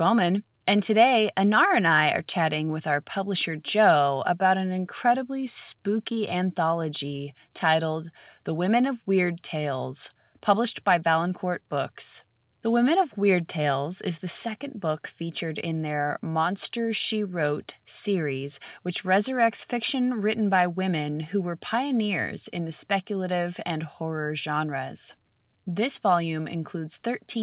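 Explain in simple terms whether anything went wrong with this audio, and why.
Nothing stood out as a problem on listening; the speech has the narrow, slightly muffled sound of an ordinary landline call, which is simply how telephone coding works.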